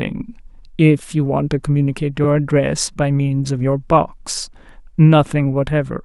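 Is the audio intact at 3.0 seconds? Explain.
Yes, at 3.0 seconds the speech plays through without any dropout, click, distortion or other fault.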